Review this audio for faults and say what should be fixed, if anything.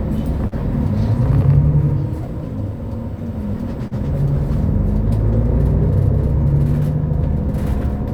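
Short concealed packet loss occurs at 0.47–0.55 s and 3.88–3.94 s. Each time about 40 ms of audio arrived too late, and the receiver extrapolated the preceding sound for 41 ms and 35 ms, causing a brief smear before blending back. A deeper jitter buffer or forward error correction on the link would prevent it.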